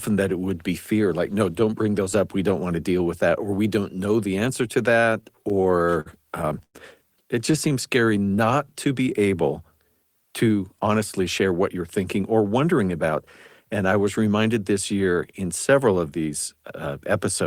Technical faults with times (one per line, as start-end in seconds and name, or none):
5.21-6.76 repeated stalls (stutter)
7.51-8.74 jitter buffer slow-down
10.73-12.39 jitter buffer speed-up